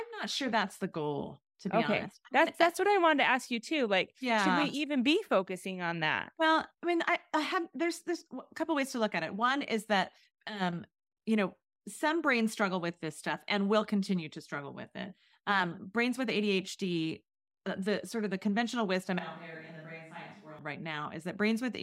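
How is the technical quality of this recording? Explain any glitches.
One glitch: a switch to a distant microphone from 19.19 to 20.59 s, just after "of the conventional wisdom". The speech turns abruptly roomy, hollow and thin, roughly 10 dB quieter with audible background noise, likely because the close microphone's feed dropped out.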